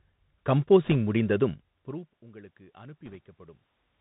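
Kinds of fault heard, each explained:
Bluetooth CVSD headset codec, throughout: the one-bit up-or-down coding, which fits a 64 kbps headset link, cuts everything above 4 kHz. Loud high sounds outrun the adapting step and distort, s sounds turn scratchy, and a granular hiss sits beneath the speech.
Bit errors on a Bluetooth voice link, 0.84 to 0.95 s and 3.06 to 3.16 s: flipped bits each move the waveform by only one step, whose size grows with the speech level, so there are no sharp clicks, just brief rushing crackle. The first burst, at roughly two percent errors, is slightly denser than the second.
Automatic gain rising, 1.85 to 3.68 s: after the input drops by about 24 dB, following the talker moving away near 1.5 s, the gain control slowly raises its gain by about 5 dB, so voice and room noise swell together.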